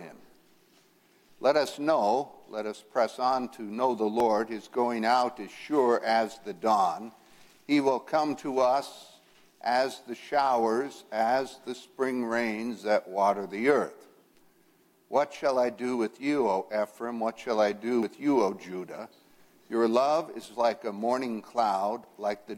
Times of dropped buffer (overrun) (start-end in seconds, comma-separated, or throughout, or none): 4.20, 18.03, 22.04